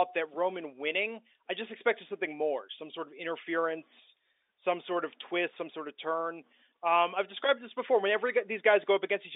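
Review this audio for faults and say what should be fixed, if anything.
Nothing here needs fixing: it's speech over ordinary telephone coding, with the narrow phone-line band you'd expect, and no faults turn up anywhere in it.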